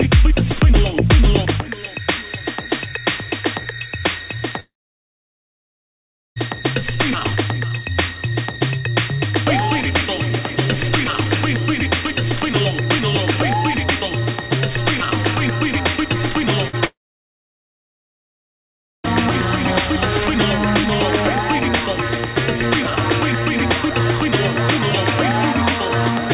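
From 4.6 to 6.38 s the sound trails off into a brief fading buzz, then goes almost silent for about 1.7 s before resuming further on. This is likely a long network dropout, with nearly 1.8 s of audio never received. The spectrogram shows a blank band, and the waveform a flat line. At 16.68 to 16.75 s a burst of packet loss removes about 60 ms. The receiver stretches the last sound into a short decaying smear, visible as a brief tapering patch before the signal resumes. Only 0.1 s later, from 16.85 to 19.06 s, a second likely long network dropout leaves roughly 2.1 s of near-silence after a quick fade, lasting 2.2 s in total. Throughout the clip the spectrogram stays empty above 4 kHz, the limit of the call path's G.711 coding.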